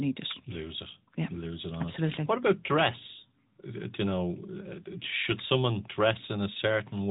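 AMR narrowband mobile codec damage runs through the whole recording, from start to finish. The speech has been squeezed through a phone-network coder that samples at 8 kHz and rebuilds the voice from a vocal-tract model excited by sparse pulses, frame by frame. Everything above about 3.8 kHz is gone, so sibilants lose their edge and the sound turns boxy, while a plainly audible buzzy, synthetic grain fits a mid-rate mode of around 10.2 kbps.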